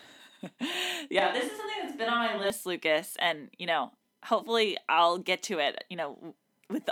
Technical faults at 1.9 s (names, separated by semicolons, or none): switch to a distant microphone